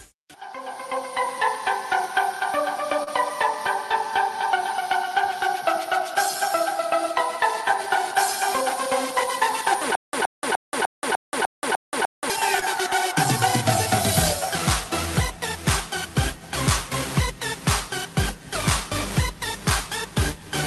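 At about 3.03 s there's a short concealed packet loss. Roughly 40 ms of audio never arrived in time, and the receiver papered over about 31 ms of it by extending what it last had and then fading back into the real signal. What you hear is a quick smear, a brief wobble lasting around 0.05 s.

From 9.95 s to 12.30 s things go properly wrong with a stutter with silent gaps. The same 122 ms fragment plays eight times, each followed by about 178 ms of dead digital silence, so it repeats on a steady beat roughly every 0.3 s. It sounds like a skipping player. That's likely the stream stalling and replaying its last buffer on each retry, and whatever should have played during those two-odd seconds is gone.

Right after, at about 12.60 s, there's another short concealed packet loss, this time around 20 ms missing and fully filled in, so it's just a brief smear or wobble.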